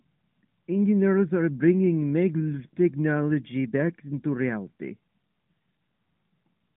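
No technical faults occur anywhere in this speech.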